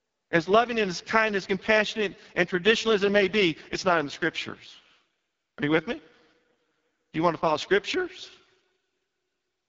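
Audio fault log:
Throughout: AMR wideband (HD Voice) codec, heavily degraded. The speech sounds rough and raspy, which points to the lowest AMR-WB mode, around 6.6 kbit/s. At that rate the pulse-driven vocal tract model has too few bits to follow the waveform closely, so the excitation comes out coarse. Nothing is heard above about 7.5 kHz, and the top band sounds like filled-in noise rather than real detail.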